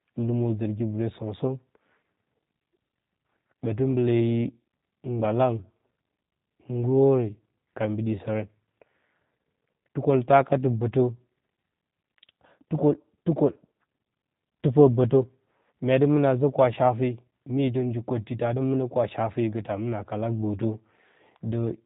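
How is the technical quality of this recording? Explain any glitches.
The quality is limited by a G.729 codec heard from start to finish. The narrow, slightly synthetic character fits an 8 kbit/s G.729A stream. Speech is rebuilt from a vocal tract filter and sparse pulses, so it sounds rough and buzzy, and a spectrogram shows nothing above 3.8 kHz.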